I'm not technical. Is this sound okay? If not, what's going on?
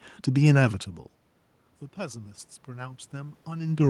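No. From 1.94 s to the end, voice and room noise swell together: automatic gain rising, the system slowly turning itself up after the input went quiet.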